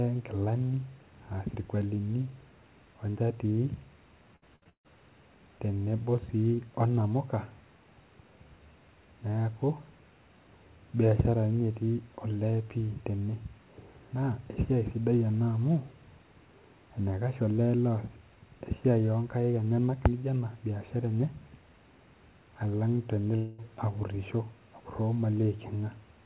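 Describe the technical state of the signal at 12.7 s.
At 12.7 s the speech is intact, with no dropout, glitch or distortion, only the steady narrowband character of the call path, whose telephone-grade coding leaves nothing above 4 kHz.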